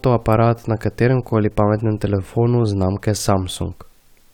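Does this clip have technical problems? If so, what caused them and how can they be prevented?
No, nothing technical gets in the way here, so there's no cause to track down and nothing to prevent.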